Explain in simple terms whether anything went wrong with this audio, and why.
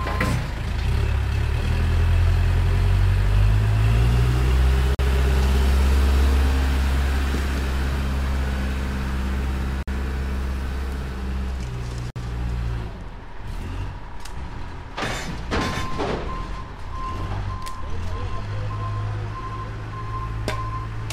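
Three short dropouts break the sound, at 4.95 s, 9.83 s and 12.10 s. Each is a gap at a join of encoded pieces. The audio was compressed in separate chunks and then glued together. Every chunk carries a little silence at its start and padding at its end. Nobody trimmed these, so a hole of about 44, 49 and 56 milliseconds opens at each join. The edges sound blurred, and the sound then resumes exactly where it left off.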